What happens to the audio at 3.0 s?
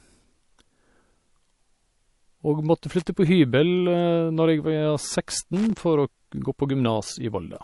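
From 2.99 to 3.07 s there is a short burst of loose connector crackle. A worn or dirty contact is rapidly making and breaking the circuit, chopping the speech signal on and off. It sounds like a brief, irregular scratch lasting about 80 ms. On the waveform it appears as jagged dropouts and sharp spikes. On a spectrogram it shows as thin vertical broadband streaks crowded into that stretch.

Across the whole clip, including this moment, there is nothing above 11.3 kHz, with a hard ceiling on the spectrogram and the muffled, swirly residue of heavy MP3 coding. This is likely low-bitrate audio saved at a high bitrate. The material appears to have been squeezed through a low-rate MP3 encode, around 48 kbit/s, and then re-encoded at a much higher rate, which kept the missing top end and the artefacts without restoring anything.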